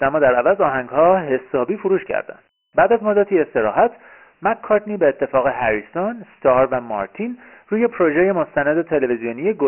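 The clip is speech with Dialogic VOX ADPCM damage throughout. Nothing reaches above 3 kHz, which points to 6,000 samples a second at 4 bits. Heavy coding grit trails the speech.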